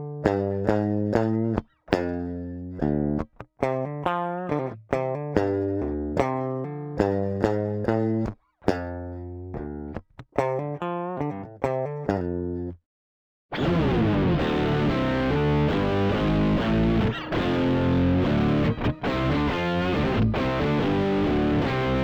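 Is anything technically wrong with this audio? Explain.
Yes, there's imaging from linear upsampling throughout. Straight-line interpolation, which fits a 24 kHz source raised to 44.1 kHz, filters weakly, dulling the top and leaving a mirror image from 12 to 24 kHz, roughly 50 dB down, heard as faint metallic shimmer on high content.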